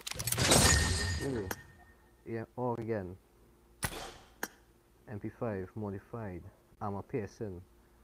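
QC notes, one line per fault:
0.41 to 1.53 s, call bitrate drop: the encoder fell from 48 to 13 kbps, so the sound turns coarse and dull until the bitrate recovers.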